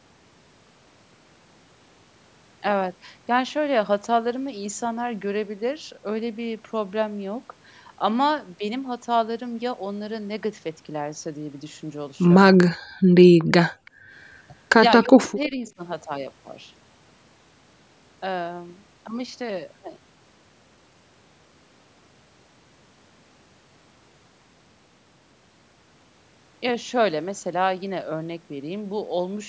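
At 12.68 to 12.75 s the speech drops sharply, by around 30 dB, for roughly 70 ms. This is speech suppressed in double talk, likely because the echo canceller could not tell the near talker from loudspeaker echo while both sides were active and attenuated everything.

Between 13.03 and 14.11 s the background is gated by the echo canceller three times: 13.03 to 13.13 s (about 28 dB down), 13.34 to 13.47 s (about 25 dB), and 13.72 to 14.11 s (about 31 dB). Each time the canceller clamped the microphone while the far end played, so the room tone ducks and then recovers.

Inside that last dip, at 13.85 to 13.91 s, a brief, very faint delayed copy of the sound arrives about 337 ms late, roughly 35 dB below the speech. This is echo leak, likely from loudspeaker pickup that the canceller left unremoved.

At 15.14 to 15.73 s the speech is again suppressed in double talk, likely from the same confusion. 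It drops by around 30 dB over roughly 400 ms, against the band-limited call audio, which has nothing above 8 kHz.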